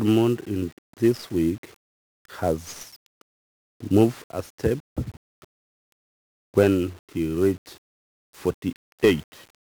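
A one-bit coder has been applied to this speech recording throughout: 1-bit DFPWM compression, consistent with a stream of about 48 kbps, where each sample's single bit nudges an adaptive level up or down. Heavy broadband quantisation noise results, leaving the speech fuzzy and crackly, its treble buried under hiss.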